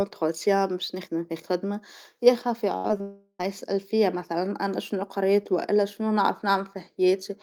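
Speech, with a cluster of network faults. A burst of packet loss at 2.77 to 2.86 s leaves a held, fading continuation of the last sound, and about 60 ms of audio is skipped. After "في الخدمة يا خافي" come two short concealed packet losses, at 2.88 to 2.91 s and 2.97 to 3.01 s. Each is a brief smear where about 20 ms went missing and was patched over. From 3.01 to 3.41 s the sound trails off into a fading continuation of the last sound, then about 50 ms of silence, before resuming at "يسأل فيا مثلا أنا". This is likely a long network dropout that cost about 380 ms.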